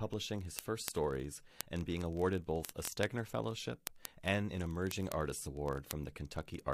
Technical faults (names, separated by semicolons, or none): word clock ticks